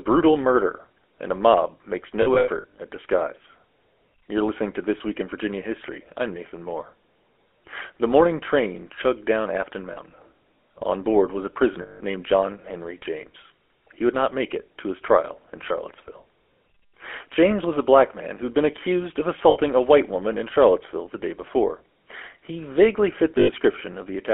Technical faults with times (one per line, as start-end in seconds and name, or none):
0.00-24.33 GSM full-rate codec
2.22-2.79 lost GSM frames
9.92-9.96 lost GSM frames
11.82-12.01 lost GSM frames
19.50-19.57 lost GSM frames
23.38-23.49 lost GSM frames